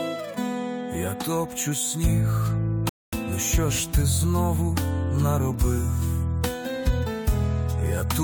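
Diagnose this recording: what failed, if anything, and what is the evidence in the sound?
Playback failed: the player drained its buffer of downloaded audio and halted until more data arrived, a rebuffering stall. At 2.89 s the sound drops to silence for about 0.24 s, then resumes at 3.13 s exactly where it stopped. Nothing is skipped; the gap only adds time.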